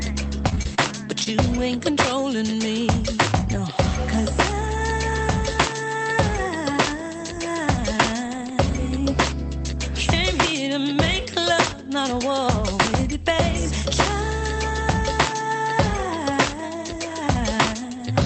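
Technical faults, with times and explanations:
0.49–0.80 s, repeated packet loss (robotic sound): Four gaps land in this short stretch, the longest about 29 ms. The receiver patches each by extending the last sound, so roughly a quarter of the span is synthetic fill. The result is choppy, with pieces missing.
1.24–1.37 s and 1.78–1.95 s, short concealed packet loss: About 20 ms goes missing in each. The decoder continues the preceding sound, then blends back into real audio. Each one leaves a brief smear or wobble and stretches timing by roughly 10 to 15 ms.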